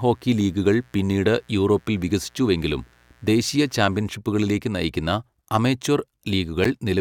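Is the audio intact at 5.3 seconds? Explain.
Yes, the speech at 5.3 seconds is intact, with no dropout, click, distortion or other fault audible at that moment.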